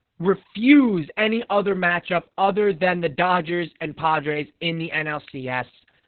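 Throughout, Opus voice compression runs narrowband SILK at what sounds like about 6 kbps, removing everything above 4.4 kHz; the speech comes out muffled, hoarse and robotic.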